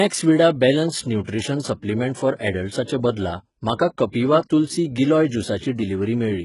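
From start to finish, the speech has likely passed through HE-AAC compression at a very low rate, consistent with about 12 kbps. The treble is copied up from lower bands rather than coded, so s sounds come out heavily gritty and metallic, and nothing remains above 11.1 kHz.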